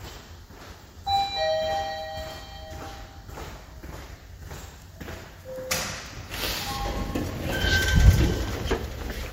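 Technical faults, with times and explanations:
No technical faults detected.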